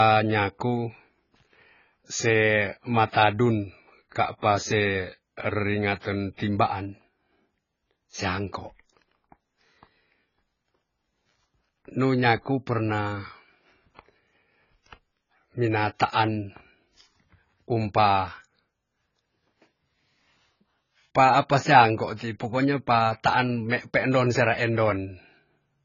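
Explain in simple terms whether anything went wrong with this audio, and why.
Yes, something went wrong. From start to finish the speech sounds dull and muffled, with a watery, warbling fizz on hissy sounds, and nothing above about 7 kHz. That points to heavy AAC compression as the likely cause, squeezing the audio too hard.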